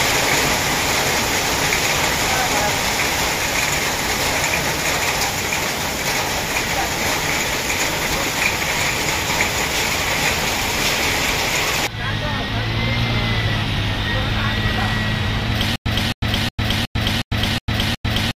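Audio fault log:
15.76–18.38 s stutter with silent gaps: a likely playback stall kept replaying the last fragment, so a 265 ms burst repeats seven times with 100 ms silences until the end.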